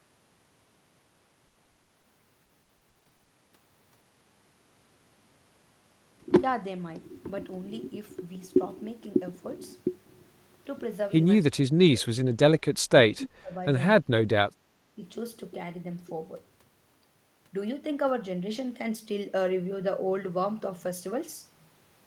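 Packets went missing again and again from 1.47 to 2.05 s and from 2.45 to 3.31 s: six gaps in the first stretch (longest 80 ms), nine in the second (longest 60 ms). The receiver patched each hole by stretching out the preceding sound, so close to half of each stretch is filler. The repeated packet loss gives the speech a choppy quality, with fragments missing between the smeared patches.

From 11.52 to 15.03 s the echo canceller likely mistook simultaneous talk from both ends for loudspeaker echo and pulled the near talker down. This speech suppression in double talk hits at 11.52–12.27 s, 12.84–12.92 s, 13.09–13.54 s, 14.01–14.31 s and 14.47–15.03 s. The level falls by roughly 20 to 30 dB, so the voice dips sharply or drops out in pieces.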